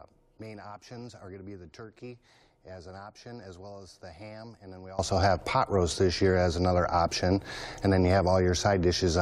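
From 0.0 to 4.99 s the mono sum drops by about 20 dB, most likely from one channel inverted, so the content common to both channels cancels.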